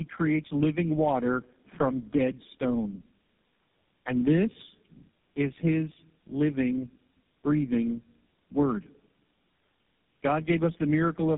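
All the way through, this speech has been through tandem speech coding. The call looks to have crossed three separate low-rate speech codecs, something like a G.729-type coder, then AMR, then finishing on GSM full rate, each decoding and re-encoding what the last one had already mangled. The damage stacks up, so voices come out rough, muffled and warbly, with nothing left above about 3.6 kHz.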